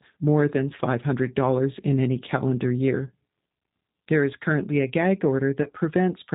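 Right from the start it's G.729 at 8 kbit/s: nothing above 4 kHz, and the pulse-built excitation gives the speech that rough, slightly synthetic edge throughout. Around 5.63 to 5.68 s there's VoIP packet loss concealed by the codec: about 30 ms went missing, which fits one dropped packet, and the decoder stretched its last frame into a brief, fading smear.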